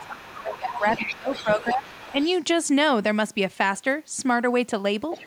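Right from the start, 0.0 to 1.15 s, a second voice from the far end is leaking through, sitting roughly 10 dB under the main talker. That's the other side's voice leaking through, most likely the loudspeaker's output getting back into the mic after the echo canceller failed to strip it all out. Over that same opening, up to about 1.9 s, the main speech keeps ducking, dropping by as much as about 20 dB and losing ground for around a second and a half in total. That's speech suppressed in double talk. With both ends talking at once, the canceller likely couldn't separate its own talker from the echo and pulled both down together. The leak returns from 1.32 to 2.25 s, fainter this time at about 15 dB below the speech. A last short scrap turns up from 5.11 s to the very end, again roughly 15 dB down.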